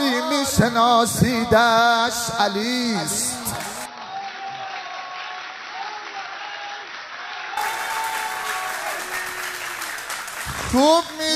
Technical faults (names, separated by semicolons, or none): input switched to a poorer device